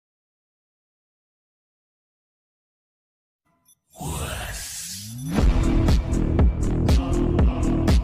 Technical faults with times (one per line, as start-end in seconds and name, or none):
none